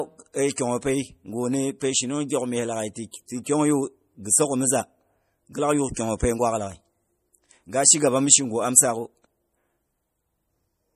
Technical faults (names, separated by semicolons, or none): MP3 compression; pre-echo